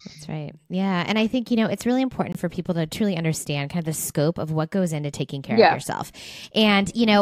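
Speech, with a likely Bluetooth dropout: a packet missed its delivery window to the headphones and was discarded, so the output falls silent from 2.32 to 2.37 s, between "you know it's really" and "for people to truly", then resumes as though playback had continued.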